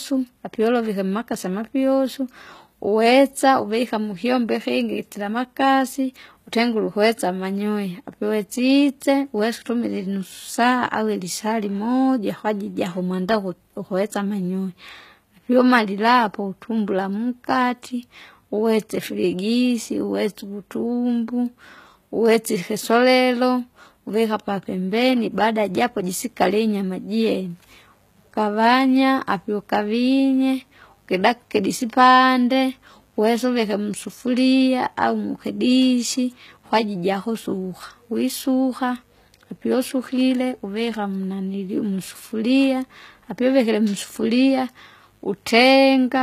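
From the first second the speech carries plainly audible codec damage, and the top end stops dead at about 14.9 kHz. That points to HE-AAC compression, likely at a low bitrate around 20 kbps. At that rate the encoder keeps only the lower spectrum and fakes the treble with spectral band replication, copying lower bands upward under a rough envelope. The rebuilt highs don't line up harmonically with what's underneath, so the s sounds come out wrong.

At 25.32 s a mains buzz comes in and stays right to the end at 46.22 s. It's built on 50 Hz, with the switching spikes from something like a dimmer, rectifier or an unshielded run landing twice per cycle and throwing harmonics up into the kilohertz range. You hear it as a steady, raspy buzz sitting roughly 40 dB below the speech, underneath everything for the last twenty-odd seconds.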